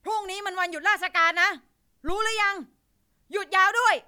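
Phantom power thump, 2.09 to 2.57 s: switching the input's supply sends a step through the coupling capacitors, a deep thump peaking at about -20 dBFS, decaying in 109 ms.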